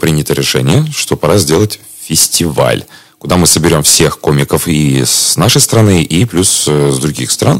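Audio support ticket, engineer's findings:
Hard clipping, throughout. Harsh fuzz on every loud peak. Probable component: a gain stage or converter driven about 12 dB past full scale, so a few percent of samples are cut flat. Not soft clipping or limiting: the flat tops create high harmonics, giving edgy crackle rather than rounded, compressed loudness.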